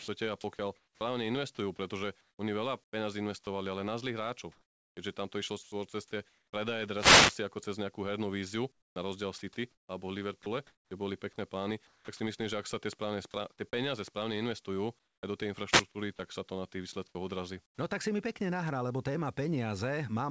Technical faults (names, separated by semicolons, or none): sound chopped by the voice detector; wireless microphone noise hit; comfort noise in place of the background; sound dropped by the voice detector